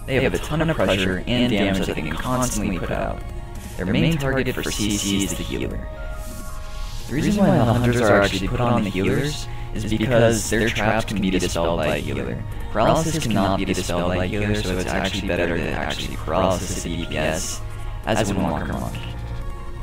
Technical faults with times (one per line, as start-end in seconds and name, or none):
0.00-19.82 channel delay (doubling)